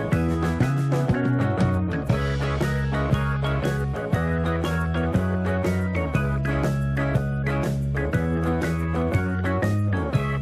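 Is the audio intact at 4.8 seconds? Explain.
Yes, the audio is intact at 4.8 seconds, with no dropout, click, distortion or other fault audible at that point.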